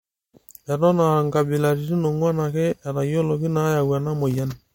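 Throughout, the speech has nothing above 16.7 kHz, likely low-bitrate audio saved at a high bitrate: an earlier 64 kbit/s MP3's losses survive the 320 kbit/s re-encode.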